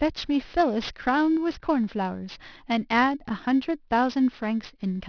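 Speech whose sibilants sound gritty and metallic throughout. This is aliasing: content above 5.5 kHz folded back unfiltered, consistent with resampling from 24 kHz to 11 kHz.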